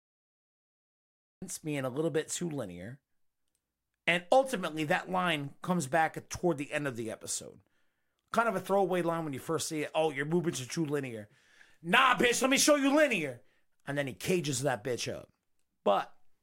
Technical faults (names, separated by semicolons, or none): cut-off start